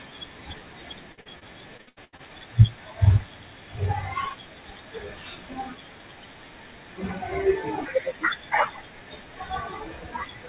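From 1.12 to 2.21 s the speech breaks into a run of repeated packet loss, giving a robotic sound. Eight short holes, the longest about 81 ms, are each bridged by stretching the preceding sound, so roughly a third of that second is synthetic fill. It sounds choppy. On a spectrogram, repeated smeared harmonic blocks alternate with abrupt cuts; the waveform shows uneven, looped-looking chunks. Everything sits below 4 kHz, as expected from a narrowband 64 kbps A-law call path.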